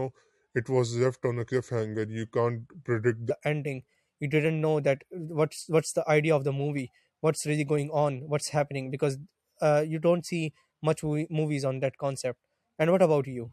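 From 0 to 3.30 s the speech plays as a section at the wrong speed, running at 0.819 times normal, so it sounds slow and about three semitones deep, likely from a clock mismatch. On a spectrogram the harmonics sit lower and closer together.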